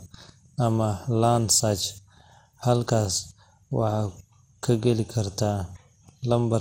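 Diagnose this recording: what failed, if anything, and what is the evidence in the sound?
Codec stage. The speech sounds swirly, hollow and smeared throughout, with nothing above 16.7 kHz. Likely generation loss from around seven re-encodes, fitting MP2 at 96 kbit/s.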